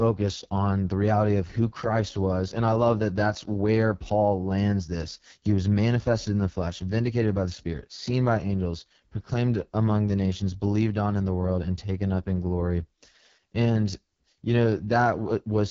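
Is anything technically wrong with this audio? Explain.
Yes. An AMR wideband (HD Voice) codec runs through the whole clip. The speech is coded with a pulse-excited vocal tract model up to 6.4 kHz, and the band above is filled with shaped noise, with nothing above about 7.3 kHz. The damage is heavy, and the rough, raspy texture on the speech fits the lowest mode, around 6.6 kbit/s, where too few pulses describe each frame and the synthetic excitation becomes audible.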